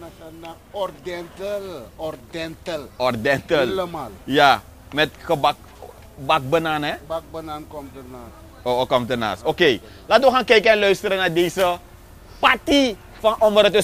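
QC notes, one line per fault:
No audible faults found.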